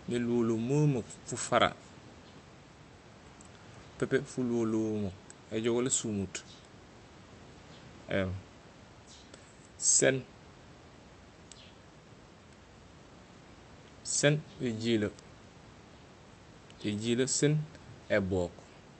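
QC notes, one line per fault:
Nothing to flag here, just some quiet room noise sitting about 23 dB below the speech and the normal character of an Opus call link.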